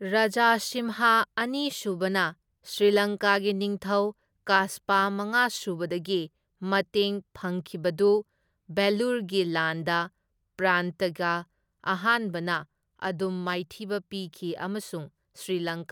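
Nothing technically wrong turns up anywhere in this speech recording, so there's no fault to point to.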